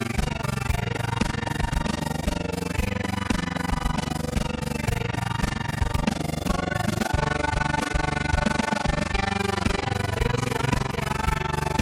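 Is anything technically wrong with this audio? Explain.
Yes. Throughout the clip there is overlap-add ripple: the audio was split into windowed frames and rejoined with an overlap whose gains do not sum evenly, so the level dips by about 60 dB once per frame, around 20 times a second, giving a harsh, chopped flutter.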